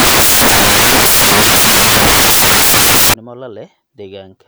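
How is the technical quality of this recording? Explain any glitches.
Poor for the first stretch. From 0.00 to 3.14 s, samples built from the wrong bytes turn the speech into loud white noise: misassembled bytes promote the low bits, filling the spectrogram and flattening the waveform into a dense band.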